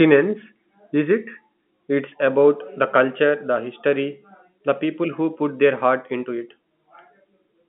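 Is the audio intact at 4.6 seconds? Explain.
Yes, the audio at 4.6 seconds is intact, with no fault at that moment beyond the narrow telephone band of the G.711 line it passes through.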